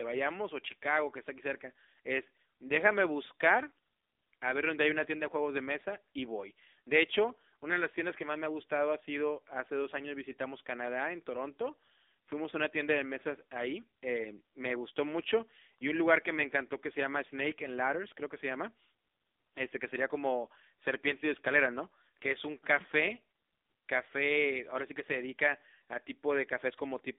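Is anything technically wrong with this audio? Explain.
Yes. Throughout, the speech carries AMR narrowband mobile codec damage: nothing above 3.7 kHz or below 250 Hz, and heavy buzzy, synthetic coloration from a low-bit vocal-tract model, fitting roughly 6.7 kbps.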